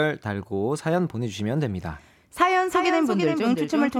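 At 2.68 s the speech suddenly picks up a doubled audio track that runs right to the end. A second full-band copy trails the original by around a third of a second, sitting a few dB below it, with no decay or room colour. It switches on abruptly rather than fading in, so it sounds like a clean slapback echo. That's likely a second capture path arriving late, or an edit that left two out-of-step copies stacked.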